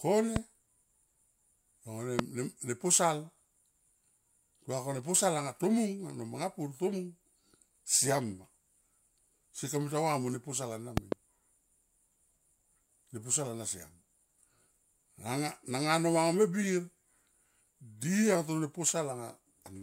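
Loud pops break in three times: a single one at 0.36 to 0.38 s, a louder one at 2.19 to 2.21 s, and a double pop from 10.97 to 11.14 s, with peaks roughly 15 to 20 dB above the speech. Each is a sharp thump added on top while the speech continues underneath, unlike a dropout click, which leaves a gap. A voltage pulse, likely from a plug, switch or static discharge, entered the signal path.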